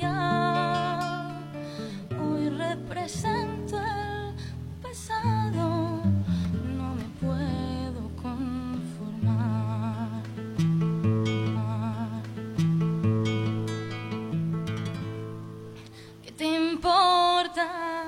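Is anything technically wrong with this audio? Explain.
Yes. A stream segment repeated from 11.52 to 13.52 s: the player fetched or queued the same chunk twice, so about 2.0 s of the programme plays again immediately, with a small blip where playback jumps back to replay it.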